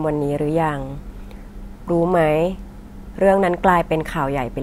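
No technical faults are audible anywhere in the recording.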